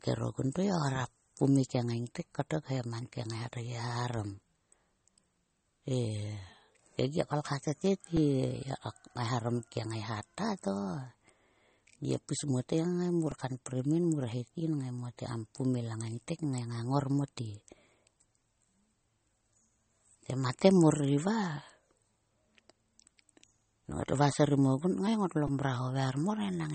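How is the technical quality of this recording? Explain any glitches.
The recording has two problems: the whole clip sounds band-limited and smeared in a way typical of heavy compression, and there are three tiny stutters from repeated buffers.

Low-bitrate audio saved at a high bitrate affects the whole clip. Nothing is present above 8.4 kHz, so sibilants sound dull, with the swirly, smeared texture of a low-rate MP3. The likely cause is audio first squeezed to about 32 kbit/s MP3 and later re-saved at a much higher rate, which cannot restore the discarded detail. On a spectrogram this appears as a flat, hard ceiling at 8.4 kHz across the entire clip.

Repeated buffers occur at 8.17 s (after "kolkha to", just before "ye kok eharom"), at 13.31 s (just before "kanprim yin mur het"), and at 25.47 s (after "kngai ngotlo"). Each time, fresh audio arrived late, so the same slice of about 2.9 ms, which fits a 128-sample buffer, played again: twice extra, once extra, then four times extra. 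They sound like brief clicks or buzzes. On the waveform, identical short segments sit side by side with abrupt jumps at each join.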